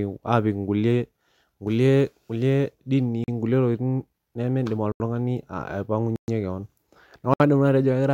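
Speech clip where the output buffer was likely not filled in time, leaving blocks of digital silence at 3.24–3.28 s (40 ms), 4.92–5.00 s (80 ms), 6.16–6.28 s (120 ms) and 7.34–7.40 s (64 ms). Each cuts abruptly to silence and back, leaving short holes.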